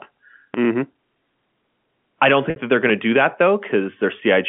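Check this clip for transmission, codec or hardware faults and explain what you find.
Two kinds of fault are present: a DC step and packet loss with pitch repetition. The G.711 A-law telephone coding shows its expected 200 Hz to 3.4 kHz line band with little or no added coding damage.

DC step, 0.54 s to 2.90 s, ending just before "to do that": the waveform's zero line jumps to an offset. Each shift of the baseline is heard as a low thump at its edge, while the speech carries on unchanged.

Packet loss with pitch repetition at 0.93 s and from 2.50 s to 2.56 s: the receiver bridged each gap by repeating the last pitch period. The first loss, about 20 ms, which fits two 10 ms packets, sounds like a brief held buzz. The second, 60 ms, which points to six such packets, is long enough to fade toward silence before the speech cross-fades back in.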